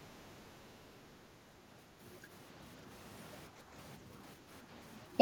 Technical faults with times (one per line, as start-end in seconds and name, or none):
3.56-3.66 background gated by the echo canceller